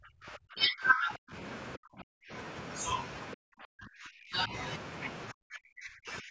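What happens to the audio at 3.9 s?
From 3.35 to 4.53 s the speech is pushed down hard, dropping roughly 40 dB at its deepest and affected over about a second. The likely cause is speech suppressed in double talk: the echo canceller, unable to separate the talker from loudspeaker echo, attenuated both.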